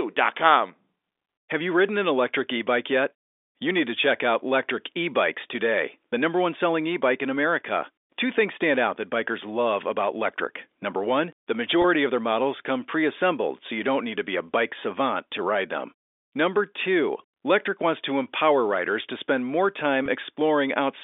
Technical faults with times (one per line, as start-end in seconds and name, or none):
11.82-11.84 packet loss with pitch repetition
20.06-20.08 packet loss with pitch repetition